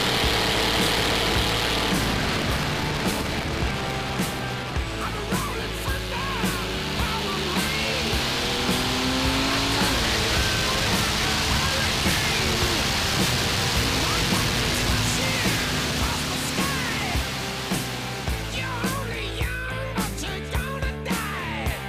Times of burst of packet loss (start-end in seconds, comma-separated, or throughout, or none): none